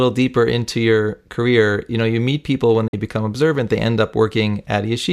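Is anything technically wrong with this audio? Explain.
Yes, there is a digital broadcast dropout from 2.87 to 2.94 s, between "you meet people when" and "become observant they end". The receiver stopped getting usable frames, most likely because they failed their checksum, and muted its output until valid data returned. The speech fades out over about 8 ms, goes silent for roughly 48 ms, which fits about two lost frames, then resumes. Whatever was broadcast in that gap is missing.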